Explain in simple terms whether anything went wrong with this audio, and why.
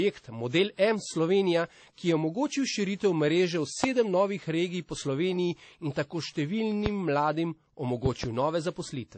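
Two things went wrong with this speech. The whole clip shows transcoding between lossy codecs: it was likely squeezed by one compressed format, then re-squeezed into MP3, so the smeary, swirly artefacts of both pile up, and nothing above about 8.3 kHz survives, which makes it dull.

There are also loud pops, sharp clicks sitting on top of the speech, which keeps going underneath: one at 3.84–3.86 s, right before "novih regij po", another at 6.86–6.89 s, and a quick double pop at 8.06–8.26 s. They're likely electrical glitches like a plug, switch or static.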